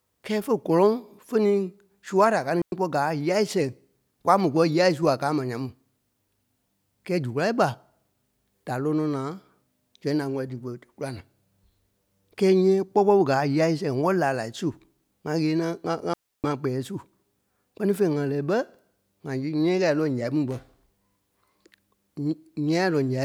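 At 2.62 s the speech drops into a clean hole lasting about 105 ms, and at 16.14 s a longer one of about 300 ms follows. Each is a digital wireless dropout: the radio link lost too much data, so the receiver muted with a very fast fade rather than passing errors through. A waveform shows the signal collapsing to a flat line with no noise burst on either side. On a spectrogram each appears as a sharp-edged, empty vertical band across all frequencies.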